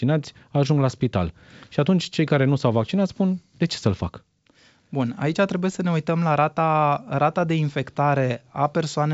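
Nothing's wrong that I can hear. It's just speech carried over G.722 wideband telephone coding at 64 kbit/s, with everything sitting below about 7.7 kHz, as that path would leave it.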